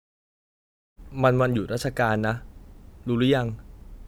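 No technical faults can be heard in this speech; the smooth fade-in around 1 s is an ordinary edit.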